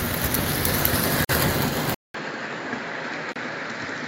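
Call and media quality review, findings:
Gap at a join of encoded pieces, twice: 1.25 to 1.29 s (48 ms) and 3.32 to 3.36 s (37 ms). Sudden dropouts with smeared edges. Separately encoded segments concatenated untrimmed. Encoder delay and last-frame padding remain as silence. Sound resumes where it stopped.

Input switched to a poorer device, likely cause, from 1.94 s to end. Short silence of about 200 ms at the switch. Sound then duller, nothing above 7.6 kHz. Level drops about 5 dB. New noise floor roughly 30 dB under signal.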